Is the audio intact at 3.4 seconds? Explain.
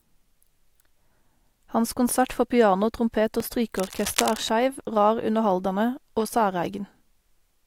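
No. At 3.40 s the output buffer likely wasn't filled in time, leaving a 5.3 ms block of digital silence that fits a 256-sample buffer. The hard cut produces a tick or dip in the speech.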